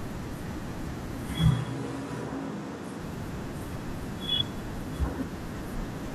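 At 1.52 s the speech abruptly turns roomy and hollow, losing its bass, then snaps back at 2.98 s. That's a switch to a distant microphone, likely because the close mic dropped out. The level barely changes, and the background noise stays well under the speech.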